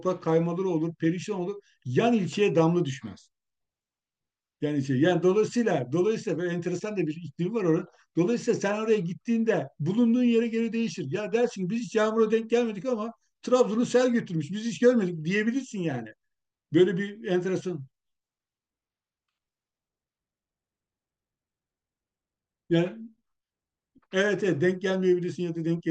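No technical faults can be heard anywhere in the recording, and the signal stays continuous and stable across its whole duration.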